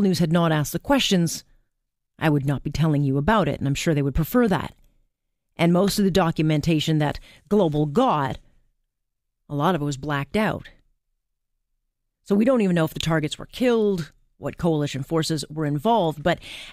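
No technical faults can be heard anywhere in the speech. There is nothing to place on a timeline.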